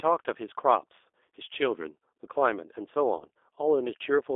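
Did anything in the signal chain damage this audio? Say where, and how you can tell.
Yes. At the codec stage, the whole clip has passed through a G.729 codec. The speech is confined to roughly 300 Hz to 3.6 kHz and has the rough, synthetic grain of pulse-excited filter coding, which fits an 8 kbit/s G.729A stream.

On the network side, VoIP packet loss concealed by the speech codec appears from 3.17 to 3.29 s. The decoder extends the last pitch and filter into fading synthetic sound, which fits about 20 ms of missing audio. The speech then stays weakened as the frames rebuild.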